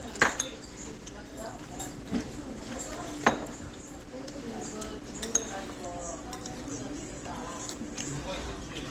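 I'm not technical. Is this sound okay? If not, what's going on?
No. The audio was likely squeezed hard by Opus compression, which discards detail to save space, leaving the sound muffled, hoarse and grainy from start to finish.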